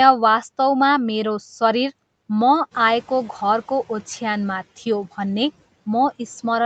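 Right around two and a half seconds the room noise jumps by about 10 dB, and the noise suppressor catching up is audible from 2.71 to 3.0 s. Its noise estimate lags, so the noise leaks through louder, then sinks by about 7 dB over 290 ms.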